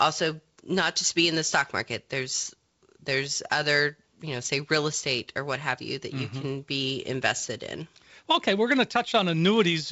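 Nothing stood out on listening to this speech clip, which comes through G.722 wideband telephone coding with its bandwidth reaching up to about 7.7 kHz.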